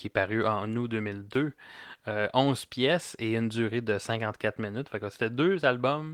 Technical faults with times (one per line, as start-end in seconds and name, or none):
none